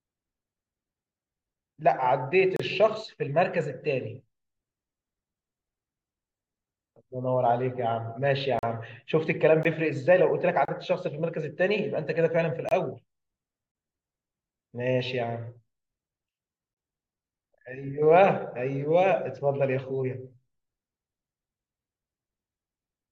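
Gaps between stream segments cut into the speech at 2.56–2.60, 8.59–8.63, 9.63, 10.65–10.68, 12.69–12.71, 13.72–13.75 and 16.74–16.77 s. Each is a hard-edged dropout to silence, between about 16 and 40 ms long, falling on one-second boundaries. The timestamps of consecutive one-second segments don't meet, so the player pads the space with silence. Nothing is lost; the speech simply stalls briefly and resumes.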